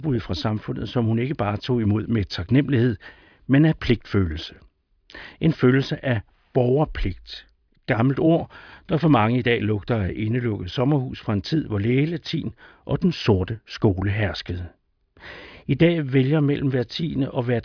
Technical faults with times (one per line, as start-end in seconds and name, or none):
none